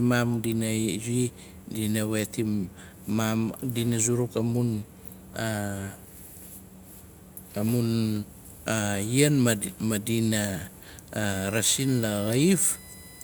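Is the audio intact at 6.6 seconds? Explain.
Yes, the speech at 6.6 s plays through intact, with no fault to be heard at that moment.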